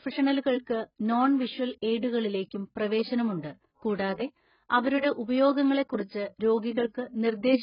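Heavy AAC compression runs through the whole clip, likely from a transform codec squeezed to a bitrate near 12 kbps. Nothing survives above 5.1 kHz, so the speech sounds dull and muffled, with smeared consonants and a watery, warbling texture on sibilants.

Pre-echo appears from 6.90 to 6.95 s, where a sharp onset lands late in a transform block and the codec's quantisation noise spreads back across that block. A short hiss of about 49 ms leads into the attack, which sounds softened and blurred.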